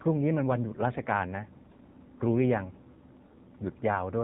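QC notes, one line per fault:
Throughout: AMR narrowband mobile codec. Nothing above 4 kHz survives, so the speech sounds boxed in and telephone-thin. A vocal-tract model rebuilds each 5 ms from a few pulses. The result is plainly buzzy and synthetic, fitting a low rate near 7.4 kbps.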